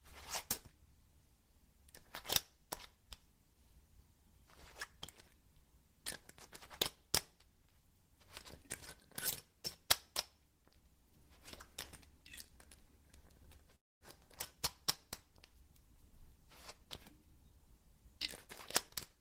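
A call audio freeze runs from 13.75 to 14.04 s. The sound stops and about 250 ms of silence fills the gap before the audio picks up again exactly where it left off. Nothing is skipped; the rest of the clip simply arrives about 255 ms later than before. The likely cause is delayed packets draining the jitter buffer, so the receiver had nothing new to play and could only pad the wait until the packets came through.

A jitter buffer speed-up follows from 16.11 to 18.48 s. The sound plays at about 104% speed with its pitch unchanged, and across that span the receiver trims out around a tenth of a second in total. It does this by cutting many very short slices, each one or a few pitch periods long, one after another. This shrinks an overfull buffer back toward its target delay, as happens after a late bunch of packets lands together.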